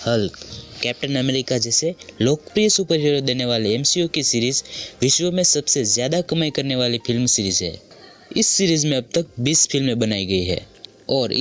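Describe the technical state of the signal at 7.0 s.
At 7.0 s the sound is in the middle of gain pumping that runs through the whole clip: the gain swings by around 10 dB, pulled down on each loud sound, likely from a fast limiter working against excessive microphone gain. The waveform envelope looks flattened, and on the spectrogram, band-limited to 8 kHz by the call's microphone processing, the level rises and falls with the gain.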